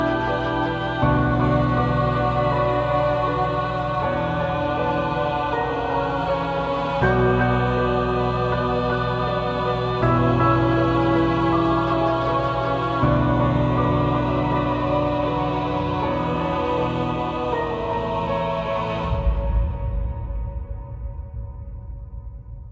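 No technical faults are audible.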